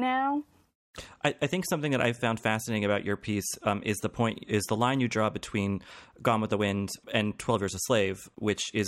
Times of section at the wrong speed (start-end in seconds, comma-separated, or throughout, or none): none